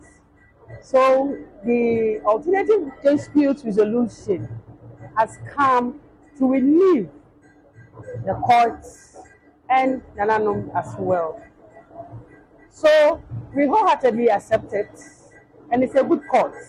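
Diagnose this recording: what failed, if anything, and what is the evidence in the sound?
Nothing stood out on listening that points to a failure at any stage of the chain.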